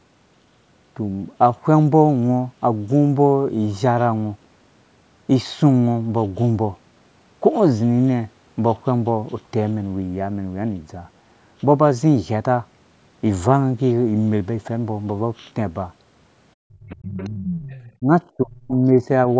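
From 16.58 to 17.56 s the speech drops out hard, by roughly 40 dB at its deepest. That's speech suppressed in double talk, likely the echo canceller clamping down because both ends were talking and it couldn't tell its own talker from the loudspeaker echo. During and just after that stretch the other side's voice leaks through, first faintly at 17.18 to 17.3 s, well under the speech, then much more clearly from 17.5 to 17.9 s, only around 10 dB down. That's likely residual loudspeaker echo the canceller failed to remove. The suppression returns as a short, shallower dip at 17.99 to 18.11 s, then again as a deep cut from 18.36 to 18.82 s. The band tops out at 8 kHz, which fits normal call microphone processing.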